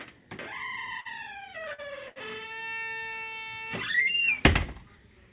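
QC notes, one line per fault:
1.00–1.07 s, 1.73–1.80 s, 2.08–2.18 s: short stall from a late packet, three times. Each time a packet arrived late, the jitter buffer ran dry, and the receiver held the last sound for about 51 ms, 52 ms and 76 ms before resuming where it left off. No audio is lost, but the timing slips by that amount each time, and the held sound has a slight buzz or dip within the 4 kHz band.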